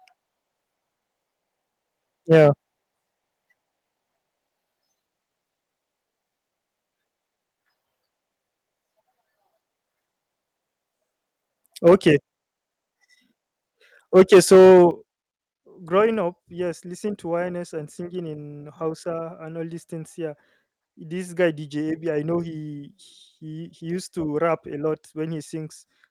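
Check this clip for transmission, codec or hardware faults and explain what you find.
Two related faults run through this speech clip: repeated clipping on loud peaks, and two sudden drops in input level that follow the overloads.

Microphone overload, at 2.31–2.49 s, 11.86–12.1 s and 14.15–14.84 s. This is likely caused by the input gain being set too high, driving peaks about 5, 4 and 9 dB past the converter's ceiling. The waveform tops are flattened, giving a harsh, crackly edge. The third event is longest and worst, with roughly one sample in seven clipped.

Microphone volume stepped down, at 11.88 s and 14.91 s. The likely cause is the call software reacting to the clipping by cutting the device's input gain in a single step, about 3 dB and then about 10 dB. Both voice and background fall abruptly in level. The second drop comes right after the longest distorted stretch.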